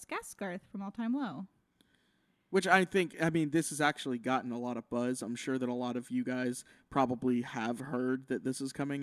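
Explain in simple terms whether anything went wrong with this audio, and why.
Nothing went wrong here from a technical point of view: the speech signal stays steady and intact throughout, with no audible faults at any point in the recording.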